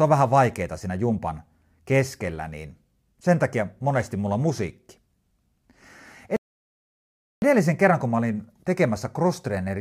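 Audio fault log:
6.36–7.42 s, rebuffering stall: the player's downloaded audio ran dry, so playback halted until more data arrived. The speech drops to about 1.06 s of silence, then picks up exactly where it stopped at "kerran kun mä", with nothing missing, only delayed.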